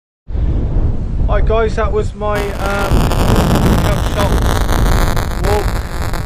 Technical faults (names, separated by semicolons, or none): buffer tearing